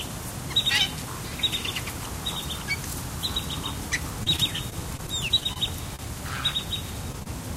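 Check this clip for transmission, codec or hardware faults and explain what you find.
Yes, there are network-type faults here: a choppy stretch, a brief stall, and two small dropouts near the end, all in what sounds like everyday sound rather than speech or music.

From 4.23 to 5.58 s there's repeated packet loss, giving that robotic sound. Over a dozen short holes, the longest about 29 ms, get patched by extending the previous sound, about 120 ms lost in total. The result is a choppy texture with bits missing.

At 5.96 to 6.05 s there's a short stall from a late packet. The jitter buffer ran dry, so the receiver held the last sound for about 30 ms until the packet turned up, then carried on. Nothing's lost, but you hear a brief smeared hold.

Finally, there's short concealed packet loss at 7.12 to 7.15 s and again at 7.23 to 7.27 s. Each time roughly 20 ms never arrived, and the decoder bridged it by continuing the prior sound and blending back. 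Each one comes across as a quick smear or wobble.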